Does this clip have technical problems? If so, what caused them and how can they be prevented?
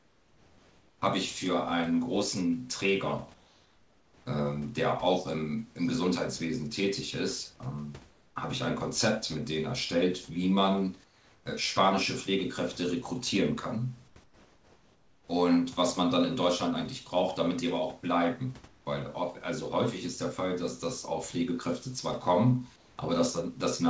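Yes. In the pauses of this speech, the real room background gets swapped for comfort noise, which is steady, featureless, and about 2 to 6 dB quieter than the real background. It happens at 0.0–1.02, 3.34–4.26, 8.10–8.36, 11.04–11.46, 14.08–14.16, 14.24–15.28, 18.68–18.86 and 22.76–22.98 s. The likely cause is discontinuous transmission: the sender goes quiet when its voice detector hears no speech, and the receiver fills the gap with synthetic noise. To prevent it, turn off DTX on the sender.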